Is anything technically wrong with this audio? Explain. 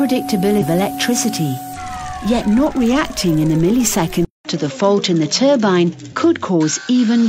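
Yes, there are two kinds of fault.

Compressed frames were skipped at 0.58 to 0.63 s and again at 1.73 to 1.77 s. Each time, the audio jumps ahead by roughly 0.3 s, about seven frames of 42.7 ms that were never decoded.

From 4.25 s to the end, the input was likely switched to a poorer device. A 200 ms silence marks the change. After it, the sound loses everything above 7.6 kHz and turns duller, and a new noise floor about 55 dB down appears, though the loudness stays roughly the same.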